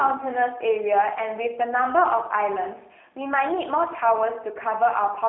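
From start to finish the speech sounds slightly rough and synthetic, confined to a 300 Hz to 3.7 kHz telephone band with nothing above 3.8 kHz. These are plainly audible G.729 codec artefacts: the voice is rebuilt from a vocal tract filter and sparse pulses, consistent with 8 kbit/s coding.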